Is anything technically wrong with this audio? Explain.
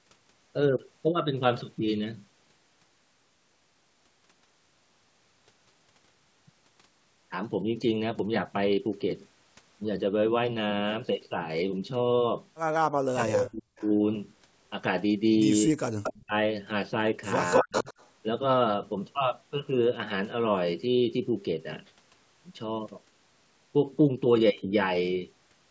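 Yes. There are two kinds of fault, both from a call played on a loudspeaker.

Speech suppressed in double talk occurs at 12.91 to 13.66 s, 15.67 to 15.79 s, 16.19 to 16.35 s and 17.62 to 17.88 s. The voice drops sharply, by roughly 40 dB at its deepest, and parts of it vanish. The likely cause is an echo canceller that could not tell the local talker from loudspeaker echo. It pushed everything down while the far side spoke.

Echo leak occurs at 13.46 to 13.95 s, 16.03 to 16.19 s and 17.47 to 18.1 s. A delayed copy of the voice comes back. The first copy lags by 261 ms and sits about 15 dB below the speech. The later two lag by 203 ms. One is about 5 dB down, and the last is about as loud as the speech itself. The likely cause is a loudspeaker echo canceller that left part of the picked-up signal in place and sent it back.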